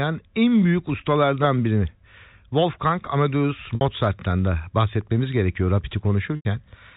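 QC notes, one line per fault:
3.75–3.81 s and 6.36–6.45 s, packet loss with pitch repetition: 60 ms then 90 ms of audio lost, bridged by looping the last pitch cycle, giving a brief held buzz that fades out.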